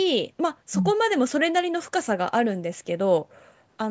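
Nothing in this speech clip counts as a technical fault: it has the typical sound of a call microphone path, with the lowest bass trimmed away and nothing above 8 kHz, and that's just how such a chain is meant to behave.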